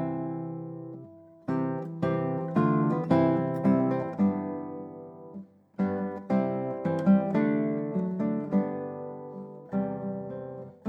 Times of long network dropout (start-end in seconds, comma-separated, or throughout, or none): none